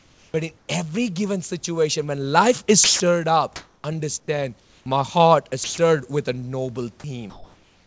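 Comfort noise in place of the background runs from 0 to 0.68 s. The room hiss, sitting about 40 dB below the speech, gives way to a flat, textureless noise that lacks the small fluctuations of the real background. This is likely discontinuous transmission: the sender goes quiet while nothing is being said, and the receiver synthesises noise roughly matched to the background's level and shape. The band is capped at 8 kHz throughout, which fits a G.722 call path.

An onset clipped by the voice detector falls at 0.31 to 0.34 s. About 30 ms of the speech's start is missing, so the first sound begins abruptly, without its soft lead-in. The likely cause is a detector that was slow to register that speech had resumed. The opening moment was never sent, and the receiver kept playing its synthetic noise until transmission restarted.

Sound dropped by the voice detector occurs at 2.84 to 3.00 s, 5.64 to 5.78 s and 7.00 to 7.04 s. 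Each time a brief stretch of speech, 80, 60 and 20 ms respectively, vanishes into steady noise before the audio returns. The likely cause is a detector that judged the sound to be background and stopped sending. Generated noise then filled 160, 140 and 40 ms, until the detector triggered again.

The same featureless comfort noise replaces the background again from 3.56 to 4.86 s and from 7.00 s to the end of the clip. In both stretches the natural room sound is swapped for uniform synthetic hiss while the sender is silent.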